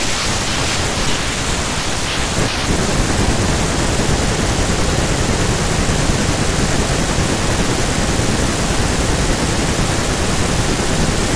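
No technical faults can be heard anywhere in this speech recording.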